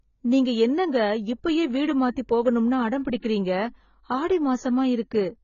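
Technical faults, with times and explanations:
Throughout, AAC compression: the speech is dull and smeared, with nothing above 7 kHz and a fizzy, warbling texture on sibilants and held sounds. This is likely a low-bitrate AAC-LC encode, where the coder drops the top band and coarsely quantises what remains, and the heavy damage fits a rate around 16 kbps. A simple low-pass filter would also remove the highs but would leave the remaining band clean rather than grainy and swirling.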